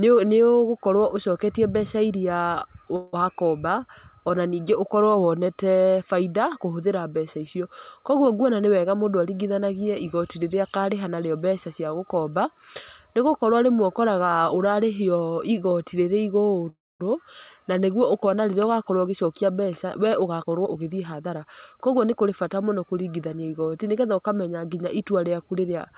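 A call audio freeze at 2.96 to 3.15 s fills about 166 ms with a fading continuation of the last sound, likely from packets delayed until the jitter buffer ran dry. Speech then resumes where it stopped, with nothing lost. A jitter buffer speed-up from 8.44 to 10.04 s trims pitch periods to shed about 150 ms of backlog, so speech runs roughly 9% faster at unchanged pitch. Another call audio freeze at 16.69 to 17.02 s holds for about 309 ms, likely from another delivery stall: a brief fading tail gives way to about 230 ms of silence before the speech continues intact. A second jitter buffer speed-up from 18.92 to 22.30 s removes about 300 ms the same way, and the speech sounds hurried. Throughout, nothing reaches above 4 kHz, which fits a 64 kbps G.711 A-law call codec.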